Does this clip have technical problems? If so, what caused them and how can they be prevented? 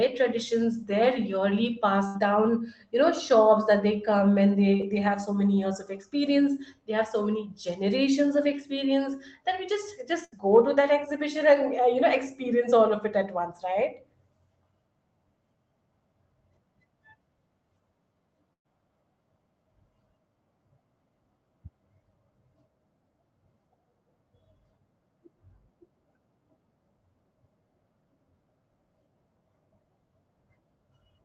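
Yes. Speech here has a burst of packet loss at 2.07 to 2.16 s, 10.25 to 10.42 s and 18.53 to 18.66 s, losing about 80, 80 and 120 ms. The receiver stretched the last sound, then faded it. The spectrogram shows smeared, repeated harmonics thinning to near-silence before the signal jumps ahead. A larger adaptive jitter buffer and redundancy or FEC prevent this.

A short concealed packet loss at 4.76 to 4.81 s, right after "that they come and", drops about 40 ms that the decoder papers over with roughly 30 ms of extrapolated sound. It is a brief wobble, visible as a blurred vertical smudge. Opus in-band FEC and a steadier network link prevent it.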